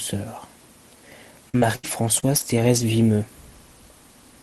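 Packets on a speech call were repeatedly lost or delayed between 1.49 and 2.84 s, a stretch of repeated packet loss (robotic sound). The jitter buffer papered over five gaps, the longest 76 ms, by extending the preceding sound, so roughly a fifth of a second is rebuilt rather than received, about 13% of that span. The result is choppy speech with fragments missing, heard through a call-codec path whose band tops out near 12 kHz, consistent with Opus.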